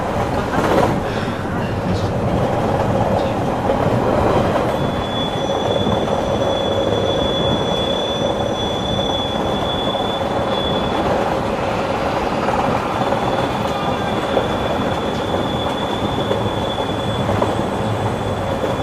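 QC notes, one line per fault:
Throughout: MP2 compression. The sound is dull and clearly damaged, with a gurgling, granular edge. Upper frequencies come and go as whole bands drop out and return. The likely cause is MPEG Layer II coding at a low rate, around 80 kbps by ear. The coder splits the signal into 32 equal bands and shares too few bits among them. Upper bands get switched off, and the rest are coarsely quantised.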